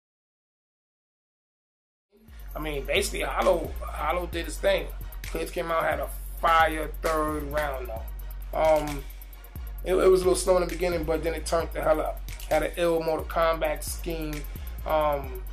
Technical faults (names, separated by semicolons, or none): none